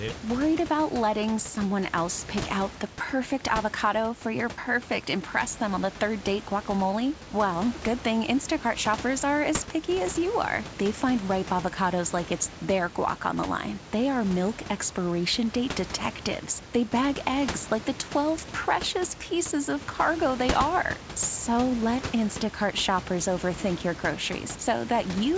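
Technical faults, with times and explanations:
No technical faults can be heard in this speech recording. The room noise sits about 13 dB below the speech, and the call path leaves nothing above 8 kHz, which fits a wideband G.722 codec.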